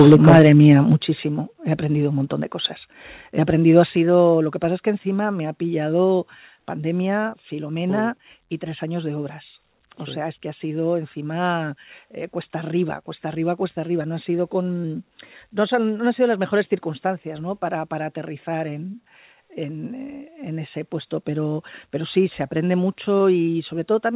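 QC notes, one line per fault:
0.00–0.47 s, microphone overload: The input volume was likely set too high, driving the loudest moments about 6 dB past what the converter could represent, with something like 7 percent of samples in this stretch cut flat at the limit. Squaring off the waveform tops adds distortion products that were never in the original sound, so the opening half-second of speech has a crackling, gritty edge.
1.02 s, 3.96 s, 4.98 s and 23.19 s, microphone volume stepped down: The call software likely judged the input too loud and cut the device's gain in single steps of about 8, 5, 2 and 1 dB respectively. The second falls between "aprendido ha" and "lo que pasa es". Because the change happens at the source, voice and background drop together, most noticeably at 1.02 s and 3.96 s.
7.30–7.34 s and 14.82–14.86 s, short concealed packet loss: About 20 ms of audio failed to reach the decoder in time at each point. 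The first comes just after "me ha pillado pandemia". The receiver synthesised a stand-in of 22 ms and 13 ms by extending the preceding sound, then crossfaded into the real signal. The result is a brief smear or wobble where the true detail should be, on a signal already limited to 4 kHz by the G.711 A-law call path.
21.15 s, microphone volume stepped up: Here the call software raised the device's input gain in one step of about 2 dB, just before "pero pero sí se". Since the adjustment is applied at the microphone rather than to the voice alone, speech and room background rise in level together at that instant, a small but abrupt lift.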